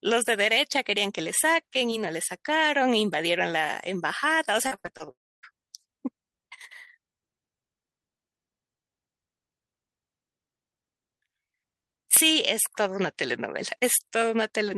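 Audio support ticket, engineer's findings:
Repeated packet loss (robotic sound), 4.67 to 5.09 s: speech goes choppy. Six short holes, longest 46 ms, roughly 160 ms lost in total. The jitter buffer or concealment keeps stretching the last bit of sound over each gap, so nearly 40% of that stretch is synthetic fill. Network path, not capture.

5.11 to 5.45 s: speech cuts to a brief fading buzz, then about 280 ms of near silence, and resumes with around 320 ms gone. Likely a long network dropout. Concealment fades out once nothing arrives, and playback picks up later without the missing audio. It follows straight on from the choppy patch, so the same link probably degraded and then stalled.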